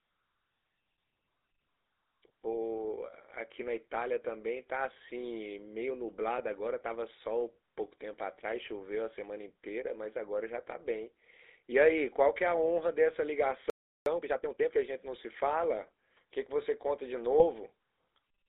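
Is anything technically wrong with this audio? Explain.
Yes. The speech carries four kinds of fault.

Throughout, GSM full-rate codec coding is plainly audible. The band runs only from 300 Hz to 3.7 kHz, which fits a 13 kbps full-rate stream. A vocal-tract model driven by sparse, regularly spaced pulses replaces the real excitation, so the voice sounds buzzy and gravelly.

GSM bit errors appear at 6.38–6.42 s and again at 17.39–17.45 s. Corrupted filter, pitch or gain parameters reach the decoder and distort individual frames. Each burst comes out as a brief squawk or gargling pop in the speech.

From 13.70 to 14.06 s, a playback stall silences the output for about 0.36 s in mid-flow. This is likely the player running short of data or its output thread being blocked. Sound resumes abruptly once output recovers.

From 14.06 to 14.78 s, time-compressed catch-up follows the stall. Small segments are cut out and cross-faded to clear the backlog, so the speech runs at 1.5 times normal speed while keeping its pitch.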